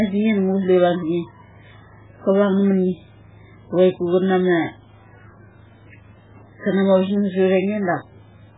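Throughout the speech, heavy MP3 compression is the likely cause: starved of bits, as at a bitrate near 8 kbps, the encoder drops everything above 3.8 kHz and zeroes weak frequency lines frame by frame, leaving dull, watery, swirling audio with smeared consonant attacks.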